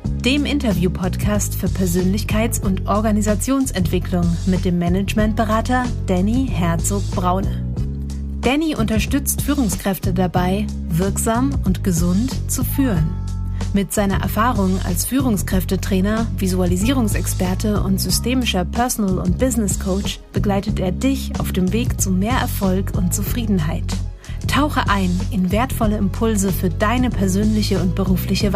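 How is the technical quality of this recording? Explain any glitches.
Nothing stood out on listening; no glitches were heard anywhere in the recording.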